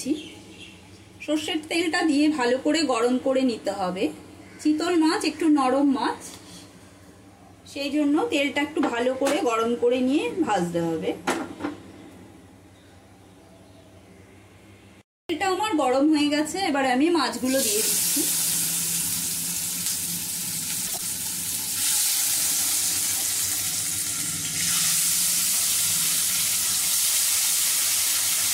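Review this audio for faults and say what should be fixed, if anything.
Frames out of order at 20.87 to 21.01 s: two adjacent blocks of about 52 ms each reached the decoder swapped and were decoded in that order, which fits two-frame blocks being exchanged. The two halves of this stretch play back to front, so the sound turns into a brief garbled flutter. No time goes missing. To prevent it, sequence-number the frames and reorder them in a jitter buffer before decoding.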